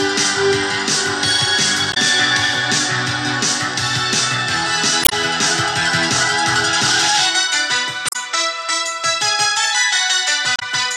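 Damaged data in a compressed stream at 1.9–1.97, 5.01–5.13, 8.06–8.16 and 10.55–10.63 s: corrupted frames throw the decoder out of sync, giving brief blips.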